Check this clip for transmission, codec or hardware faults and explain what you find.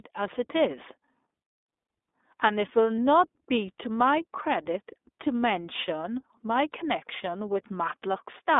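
The speech runs through the iLBC codec from start to finish, with two lost iLBC frames on top of that.

The iLBC codec damage is plainly audible for the whole clip. The line passes only about 250 Hz to 3.6 kHz. Each 20 ms frame's excitation is coded on its own at 15.2 kbps. The voice sounds narrow, slightly rough and synthetic.

Lost iLBC frames occur at 2.97 s and 8.12 s, each a single 20 ms frame. The decoder filled each gap by repeating the last pitch cycle blended with noise. Each sounds like a brief buzzy, held vowel. Normal sound returns immediately afterwards.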